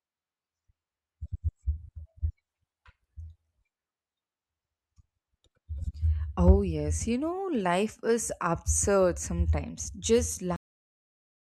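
At 10.56 s the speech stops dead mid-sound, a cut-off end. The final stretch of audio was never written out or played, so the signal falls straight to digital silence, which holds for the last 0.89 s. Unlike a fade-out or a speaker simply finishing, there is no tapering level, no room decay and no closing breath. The sound is severed partway through, with flat silence directly after it.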